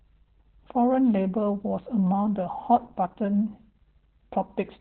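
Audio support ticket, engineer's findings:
Muffled, hoarse, slightly robotic speech throughout. Opus voice compression: nothing above about 4.2 kHz, so narrowband SILK mode; coarse excitation coding gives the rasp. Heavy damage fits a very low bitrate, around 8 kbps. Probable component: sender-side encoder settings.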